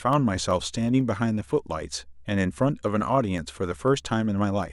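From 0.13 to 4.63 s, periodic USB or driver dropouts occur: every 0.125 s something stalls the audio path and a tiny fraction of a millisecond is skipped, about forty times in all. The speech carries a steady ticking at eight clicks per second.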